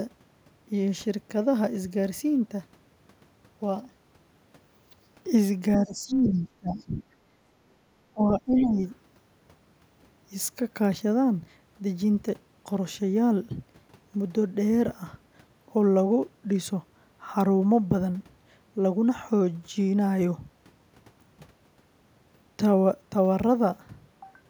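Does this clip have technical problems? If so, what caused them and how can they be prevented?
Yes. Speech suppressed in double talk at 5.78–7.12 s and 8.13–8.78 s: the voice dips by roughly 20 dB, likely because the echo canceller confused it with loudspeaker echo. Prevention: use a canceller with robust double-talk detection.

Other side's voice leaking through at 6.08–6.32 s, about 10 dB below the talker; fainter scraps at 6.8 s and 8.6 s, likely residual loudspeaker echo. Prevention: use headphones or better echo modelling.

Background gated by the echo canceller at 7.67–7.82 s: room sound drops about 9 dB for 150 ms while the loudspeaker plays. Prevention: reduce aggressive post-suppression and add comfort noise.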